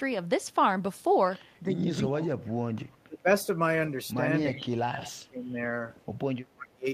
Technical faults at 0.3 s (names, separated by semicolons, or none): none